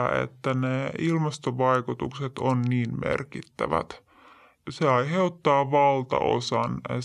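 From the first second to the last, the whole clip runs slow and low, a classic wrong sample rate problem. The voice sits about 5.5 semitones below where it should and everything plays at roughly 0.73 times normal speed, so pitch and tempo have dropped together by the same ratio. That fits audio recorded at 44.1 kHz being played back at 32 kHz with no conversion, so every sample is simply stretched out in time.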